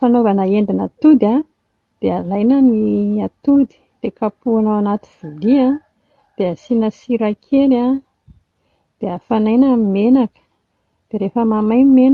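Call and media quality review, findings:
No faults found in this speech recording. The call path shows as a high-frequency ceiling near 12 kHz, which fits Opus running in its super-wideband mode.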